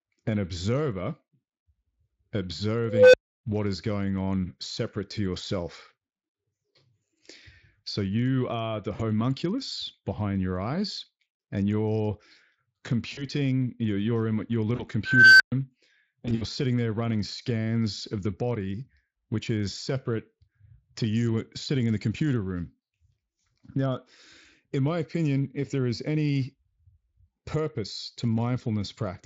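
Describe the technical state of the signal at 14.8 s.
VoIP packet loss concealed by the speech codec, 14.75 to 14.85 s: about 40 ms lost, extrapolated into a fading buzz, seen as smeared harmonics and a decaying envelope.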